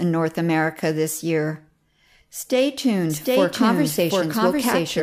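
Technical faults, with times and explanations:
3.10 s to end: doubled audio track. A second full-band copy of the speech enters abruptly and runs to the end. It trails about 0.7 s behind, at roughly equal loudness, with no decay or room colour. A slower second capture path is the likely cause.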